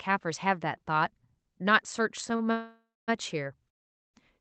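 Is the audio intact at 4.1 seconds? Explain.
No. A call audio freeze runs from 3.70 to 4.16 s: a likely jitter-buffer underrun leaves 0.44 s of silence, a flat waveform and blank spectrogram gap, before the speech resumes intact.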